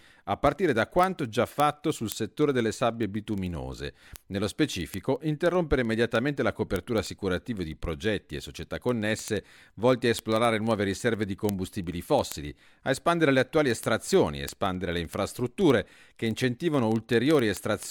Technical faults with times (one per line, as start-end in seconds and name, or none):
0.12-17.87 word clock ticks